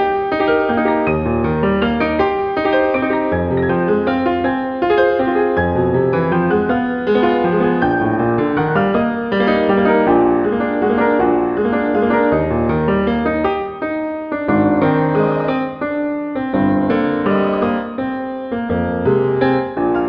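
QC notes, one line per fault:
Nothing here to flag; the audio sounds fine all the way through, with no problems turning up anywhere.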